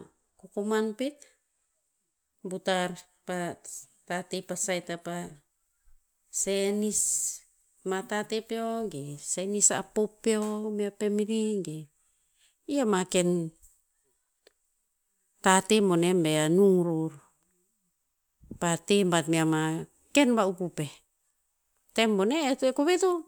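Nothing goes wrong anywhere in this speech recording, so there's no technical fault to point to at any moment.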